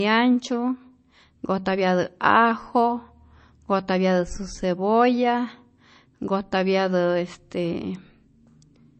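From start to finish the speech sounds dull, with nothing above about 8.3 kHz and the swirly, watery texture of heavy MP3 coding. This points to low-bitrate audio saved at a high bitrate. The likely cause is that an MP3 at around 32 kbit/s was re-encoded as a 320 kbit/s MP3. The larger file keeps every loss from the first pass, because the detail that encoder discarded cannot be rebuilt.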